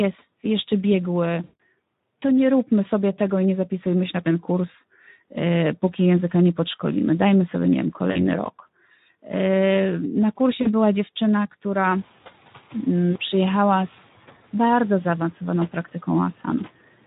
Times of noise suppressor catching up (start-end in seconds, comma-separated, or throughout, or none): 11.83-12.07